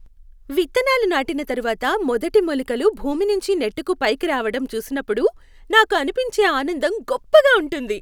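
No technical fault can be heard anywhere in this speech recording, and the signal holds steady throughout.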